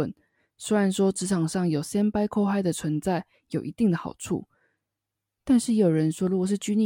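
A short speech recording with no technical fault to be heard in it. Nothing in the audio calls for a time or a cause.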